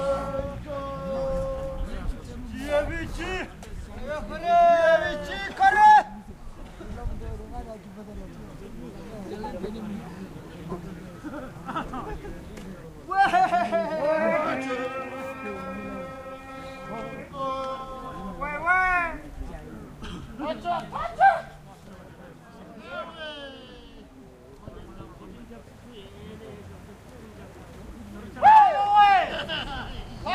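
No technical fault can be heard anywhere in this recording of sounds, and the signal comes through intact with nothing a listener could single out as a problem.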